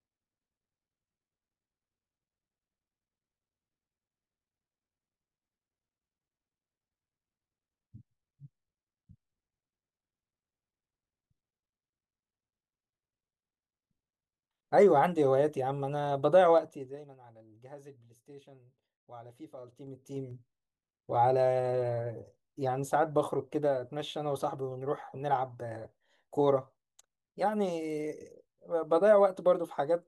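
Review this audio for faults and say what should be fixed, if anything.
Zipper noise appears twice in this speech. From 16.53 to 17.18 s the level drops by roughly 20 dB. From 19.51 to 20.53 s it climbs back by roughly 20 dB. Each move happens in 3 dB jumps, about ten a second on the way down and about seven on the way up. Every jump leaves a tiny click, so a ticking rides on the speech. Fix it by ramping gain per sample or smoothing it across each buffer.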